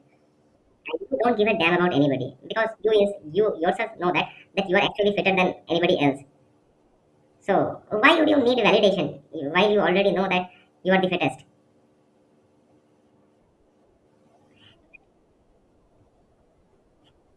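Wrong sample rate, throughout the clip: the speech runs 1.5 times too fast and sits about 7 semitones too high, which fits 16 kHz material played back at 24 kHz without conversion, so speed and pitch rise together, giving a hurried, chipmunk-like sound.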